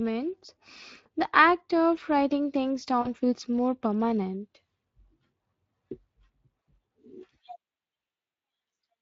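The whole recording carries Speex codec damage that is plainly audible. The speech has the hoarse, noisy grain of a CELP coder that is short of bits for its excitation signal, and the coarseness fits a Speex mode running at around 20 kbps. Because the excitation is only roughly matched to the real voice, the voiced sounds take on a rasp, and the fine texture of the speech is replaced by codec noise.

From 1.03 to 1.07 s there is a short dropout handled by VoIP packet loss concealment. The gap is about 20 ms, which points to a single lost frame. The decoder fills it by continuing the last pitch and filter at reduced gain, producing a brief smear of stretched sound before normal decoding resumes.

A longer concealment follows from 3.01 to 3.08 s, between "act of writing things" and "feels more permanent". About 40 ms is missing, which fits two lost frames. The extrapolated sound fades across the gap, and because each decoded frame depends on the previous one, the speech stays weak or distorted for a short stretch after the packets return.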